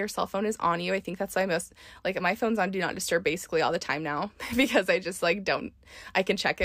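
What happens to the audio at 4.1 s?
Nothing goes wrong at 4.1 s; the audio is intact at that moment, with no dropout, click or distortion to be heard.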